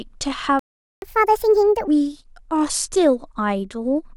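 At 0.59 s the player most likely ran short of data or had its output thread blocked, causing a playback stall. The speech cuts out abruptly and stays silent for about 0.43 s, resuming at 1.02 s exactly where it broke off.

From 1.02 s to 1.88 s the player resamples its accumulated backlog in a catch-up at higher speed, running at 1.5 times normal rate. The speech sounds hurried and chipmunk-like, raised by roughly seven semitones, before snapping back to normal speed and pitch.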